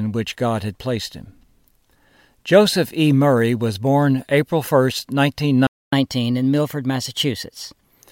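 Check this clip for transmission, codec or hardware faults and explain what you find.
Two playback faults show up in this speech clip, one right after the other.

Playback stall, 5.67 to 5.93 s: the speech breaks off mid-flow into about 255 ms of silence. The likely cause is the player running out of buffered data or its output thread being blocked. The speech then resumes.

Catch-up at higher speed, 5.93 to 8.02 s: once the stall ends, the player works through its backlog by resampling at 1.1 times normal speed. The speech sounds hurried and roughly one and a half semitones higher until it settles back near the end.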